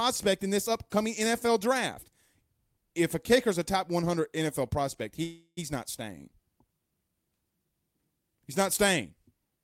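A call audio freeze runs from 5.23 to 5.59 s, just before "not staying": the last sound is stretched into a fading buzz, briefly silent, for roughly a third of a second, likely because delayed packets emptied the jitter buffer. The speech then resumes intact, about 336 ms later than before.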